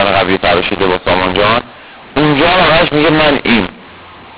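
Speech coded with A-law G.711 was decoded as mu-law throughout, a mu-law and A-law mix-up. The two logarithmic curves disagree, so levels come out scrambled: the speech turns harsh and distorted, and quiet samples are lifted, filling pauses with noise within the 4 kHz telephone band.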